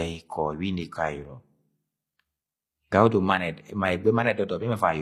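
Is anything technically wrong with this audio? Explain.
Yes. Throughout the speech there is plainly audible HE-AAC compression damage, likely from an HE-AAC v2 encode at a low bitrate, consistent with roughly 24 kbps. The codec keeps only the lower spectrum and synthesises the treble by copying lower bands upward under a coarse envelope. The highs stay bright but are not the original signal, so harmonics fail to align across the crossover, and sibilants come out gritty, metallic or lispy.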